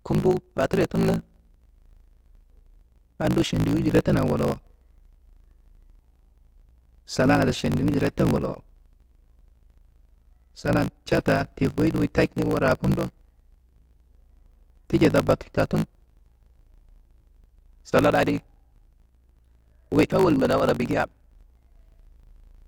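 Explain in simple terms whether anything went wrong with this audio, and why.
Something went wrong throughout this speech recording: a block size mismatch (truncated). One part of the audio chain hands over chunks of sound larger than the next part takes in, so the tail of every chunk is lost. The buzz points to chunks of about 1024 samples. Those regular chops cause a low buzz at about 54 Hz from start to finish, and the speech runs about 1.16 times too fast while keeping its normal timbre.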